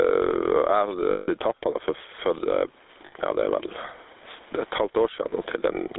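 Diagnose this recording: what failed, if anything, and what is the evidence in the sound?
Gain pumping at the input stage: loud and soft parts sit closer in level and the sound is squashed, with a gain swing of around 15 dB. The likely cause is a front-end gain set too hot feeding a fast limiter. On a waveform, the peaks look flattened and the gaps look inflated.

GSM full-rate codec damage, from the codec stage, is plainly audible throughout as a buzzy, gravelly roughness. A spectrogram shows energy confined to roughly 300 Hz to 3.7 kHz, with coarse harmonic structure. That fits the 13 kbps full-rate coder's pulse-excited vocal-tract model.

Lost GSM frames occur at the network stage at 1.12–1.29 s, 3.06–3.13 s and 5.30–5.33 s. Each gap is filled with a held, metallic ring. The longest, 160 ms, fits eight 20 ms frames. On a spectrogram these show as frozen, smeared bands.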